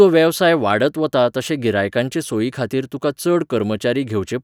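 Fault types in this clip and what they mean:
No technical faults can be heard in this speech recording, and the signal holds steady with no dropouts, distortion, noise bursts or level jumps at any point.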